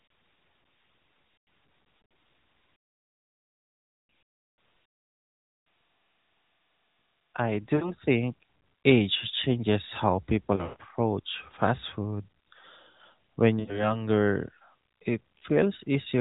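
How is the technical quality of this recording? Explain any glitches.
Lost AMR speech frames cause four short glitches in this narrowband mobile-call sound: 7.76–7.93 s (right before "think age changes how"), 10.56–10.76 s (just after "think age changes how"), 13.60–13.97 s and 15.38–15.41 s. Radio errors corrupted a few frames, so the decoder stretched the last good pitch and vocal-tract settings while fading the level. You hear brief smeared dips or warbles, with the longest fading toward silence at 10.6 s.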